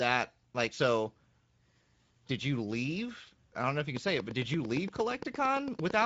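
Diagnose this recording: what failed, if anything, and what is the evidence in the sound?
The speech sounds hoarse and grainy throughout, with a hissy, noise-like upper band and nothing above 7.7 kHz. This is Speex codec damage at the codec stage. The excitation is coarsely coded, which points to a mid-rate wideband setting around 16.8 kbps.

From 3.97 s, just after "know if you can", to 6.03 s, a train of clicks ticks evenly at about 8.8 per second. There are roughly twenty similar pops, peaking about 10 dB above the speech. The likely cause is electrical interference or a struggling interface at the analogue or converter stage.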